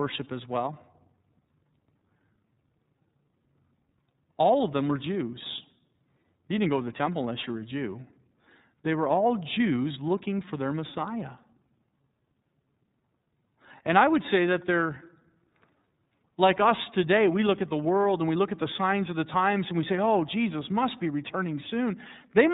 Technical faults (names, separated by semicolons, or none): iLBC codec